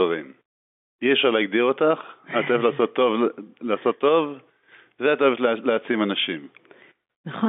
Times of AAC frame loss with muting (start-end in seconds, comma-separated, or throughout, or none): none